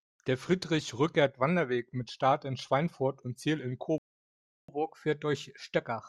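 Speech clip in which the sound cuts to silence mid-flow from 3.98 to 4.68 s, a 0.70 s playback stall, likely from the player's buffer running dry or its thread being blocked. From 4.68 s to the end, speech runs faster and higher, about a semitone and a half up. This is catch-up at higher speed: the player resamples its backlog at 1.1 times normal rate to recover the lost time.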